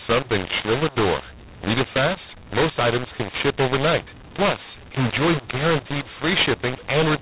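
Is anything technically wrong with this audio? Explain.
Yes. Throughout the clip there is a mu-law and A-law mix-up: the speech was coded with G.711 mu-law but decoded as A-law. The mismatched logarithmic curves scramble levels, inflating some samples, shrinking others and lifting the quietest above silence, so the speech sounds harsh and distorted and the pauses fill with noise.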